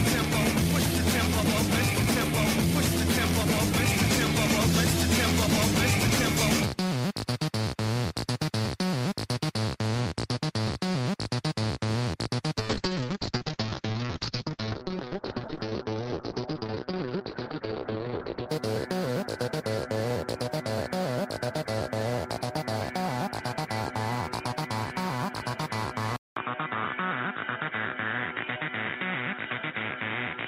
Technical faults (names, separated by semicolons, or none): call bitrate drop; input switched to a poorer device